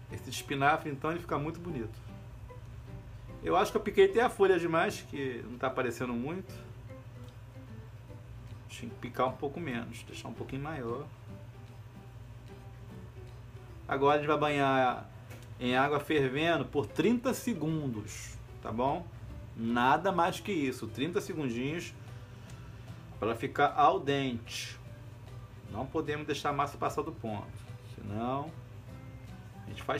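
No technical faults can be heard anywhere in the audio.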